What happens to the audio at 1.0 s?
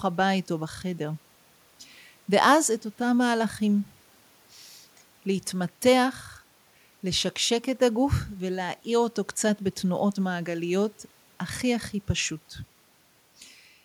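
At 1.0 s the speech runs through intact, with no dropout, click, distortion or other break in the signal at that moment.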